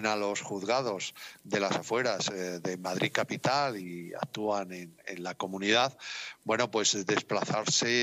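No audible technical faults.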